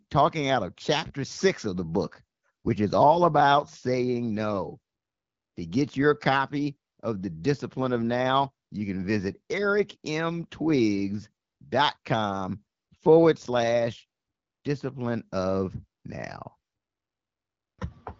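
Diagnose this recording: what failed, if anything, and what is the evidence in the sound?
Nothing failed: the speech runs through an AMR wideband (HD Voice) path whose sound fits a 12.65 kbit/s rate, with content stopping near 7.4 kHz as that codec's design dictates, and no stage from capture through playback shows a defect.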